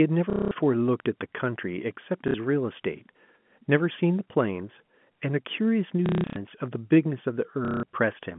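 Short robotic stutters break the speech at 0.30 to 0.51 s, 2.28 to 2.34 s, 6.06 to 6.36 s (broken up, longest run 180 ms) and 7.65 to 7.83 s. This is packet loss with the last packet repeated: the receiver kept replaying the final good chunk until new audio arrived, and such loops seldom line up with the pitch. The buzz rate of roughly 33 Hz fits 30 ms packets, heard through the narrow 150 Hz to 3.4 kHz G.711 band.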